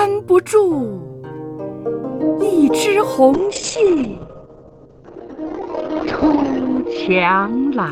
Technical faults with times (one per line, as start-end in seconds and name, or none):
3.34-7.91 call bitrate drop